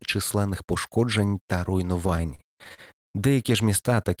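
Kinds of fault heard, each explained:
Repeated stalls (stutter): 2.07–3.11 s, after "численних пошкоджень та"; late packets emptied the buffer nine times, and continuing the last sound filled 244 ms.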